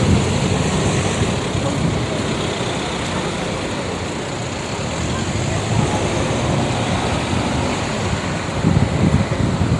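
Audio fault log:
Throughout: Bluetooth LC3 compression, likely; grainy, breathy upper band from coarse noise-filled coding, with a hard spectrogram ceiling at 11.6 kHz and plainly audible codec damage at 48 kbps.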